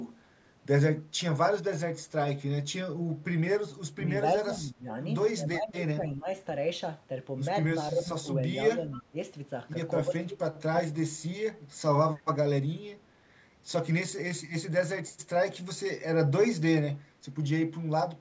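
Speech, with speech suppressed in double talk at 3.97–4.03, 4.43–4.92, 5.36–6.28, 7.91–8.28, 8.75–9.16, 10.05–10.4 and 10.71–11.14 s, where the voice dips by roughly 10 to 25 dB. This is likely an echo canceller turning down the near talker while both sides speak. An echo leak at 8.98–9.02 s adds a faint copy of the voice delayed by 272 ms and around 20 dB below it, likely loudspeaker pickup that the canceller failed to remove.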